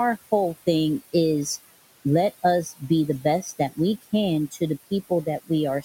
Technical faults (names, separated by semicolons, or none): noise suppressor artifacts